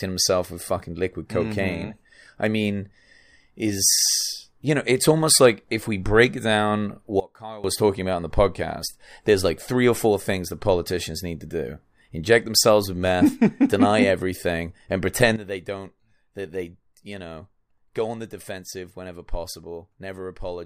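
At 7.2 s the speech and the background noise drop together by about 20 dB, then snap back up at 7.64 s. At 15.36 s they fall again, by about 12 dB, and stay down to the end. Each is a sudden gain jump. The level changes instantly rather than fading, likely a gain setting or bit shift applied with no ramp. That's why the noise floor moves in lockstep and the edges sound abrupt.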